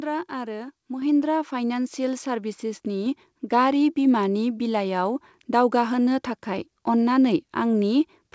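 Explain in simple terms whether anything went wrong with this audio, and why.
One thing goes wrong: at about 1.02 seconds there's a microphone volume step-up. The call software decided the mic was too quiet and turned its input up in one go, so the voice and the background suddenly get louder together. It all came through a call connection that drops everything above 8 kHz.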